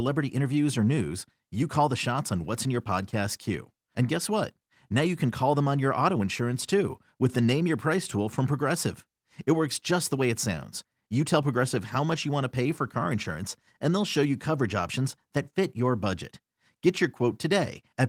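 Clock drift between sender and receiver runs through the whole speech recording. The sending clock is about four percent fast, so audio arrives quicker than it is played out and the receiving buffer keeps overfilling. Unlike random network jitter, the pressure always points the same way.

Repeated timing corrections follow from this from 0.08 s to 17.94 s, as the receiver trims short slices to keep up, leaving the speech effectively at 104 percent. They sound like faint, unevenly spaced skips. Packet-loss dropouts would instead leave gaps or smeared fills.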